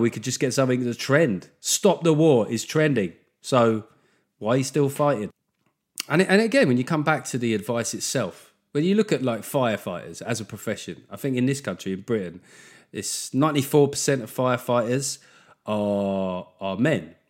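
Speech recording, no audible faults.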